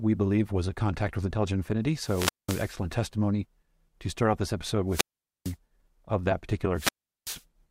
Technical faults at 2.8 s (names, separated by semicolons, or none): wireless microphone squelch dropout